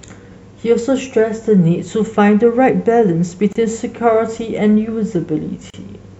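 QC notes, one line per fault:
3.53 to 3.55 s and 5.70 to 5.74 s, gap at a join of encoded pieces: the speech just drops out for about 28 ms and then 35 ms before picking up right where it left off. Looks like separately encoded chunks were glued together without trimming, so each one's startup delay and padded final frame stayed in as dead air. The codec smears the cut-in and cut-out, so the truly silent part is shorter than the full gap.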